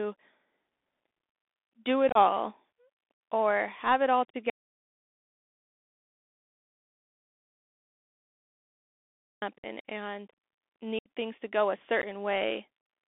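Throughout, the speech has passed through a Bluetooth CVSD headset codec. Its one-bit delta modulation, consistent with a 64 kbps link, confines the sound to roughly 250 Hz to 3.6 kHz, leaving it boxy and thin. The adaptive step lags on loud, bright sounds, so sibilants scratch and a grainy hiss sits under the voice.

Unconcealed Bluetooth headset packet loss strikes first between 2.09 and 2.17 s. Short voice packets between headset and phone failed to arrive and nothing filled the gap, so about 45 ms of audio is missing, scattered across 60 ms with a longest hole of 30 ms. It sounds like a brief chop. Another hole from 3.14 to 3.20 s wipes out 60 ms, a gap that fits around seven lost packets, just before "or have it all". A third, from 4.30 to 4.35 s, removes 37.5 ms.

An audio dropout to silence follows from 4.5 to 9.42 s, after "or have it all". For almost 5 seconds the signal falls to silence with no hiss or room tone, and then speech resumes abruptly. 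The likely cause is the recorder writing silence after the headset link failed.

The packet loss returns between 9.58 and 9.66 s, costing 52.5 ms. The longest hole, from 10.99 to 11.09 s, removes 67.5 ms, which fits about ten lost packets, and the voice briefly returns quieter as the CVSD step recovers. A final 15 ms nick at 12.02 to 12.05 s comes after "things to go a".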